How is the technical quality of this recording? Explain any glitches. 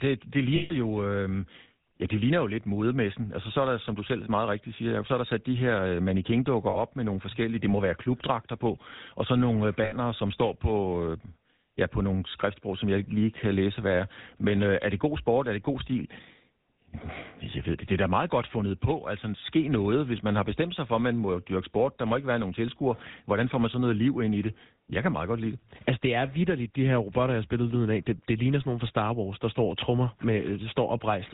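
The recording has audible technical faults. The speech has clear codec damage throughout and breaks up three times.

The whole clip carries the GSM full-rate codec. It rebuilds the voice from a vocal-tract model driven by sparse, regular pulses, and cuts everything above 4 kHz. Speech sounds dull, buzzy and gravelly. The damage fits the 13 kbps full-rate mode.

Lost GSM frames cause three dropouts, at 0.56 to 0.74 s, 6.70 to 6.79 s just before "med nogle forskellige det", and 9.84 to 9.93 s between "og så nogle øh" and "som står på øh". The decoder repeats the settings of the last good frame. Each gap becomes a brief, rough metallic ring. The first one is longest, at about 140 ms.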